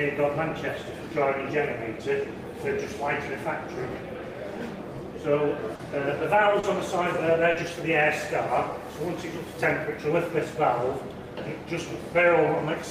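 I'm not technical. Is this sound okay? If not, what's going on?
No, there are three small glitches close together, at about 5.75, 6.59 and 7.51 seconds. Each is a short concealed packet loss. A sliver of audio, about 40 milliseconds, didn't arrive in time, so the receiving end guessed by stretching out the sound just before it and then eased back into the real audio. You'd hear it as a quick smear or wobble, and a very short sound could go missing.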